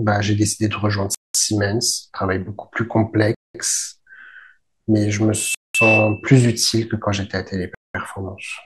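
Gaps between chunks at 1.15–1.35 s and 3.35–3.55 s: the speech arrives in 2.0 s chunks with 200 ms of silence between them, so it breaks off in hard-edged holes at each join.

Loudspeaker feedback squeal at 5.35–6.32 s: the microphone picks up its own loudspeaker until the loop runs away at 2.6 kHz. A single tone swells over roughly a third of a second to about 5 dB above the speech.

The gap between chunks at 5.55–5.75 s falls inside the squeal and cuts it briefly. The last gap, at 7.75–7.95 s, keeps the same 2.2 s rhythm.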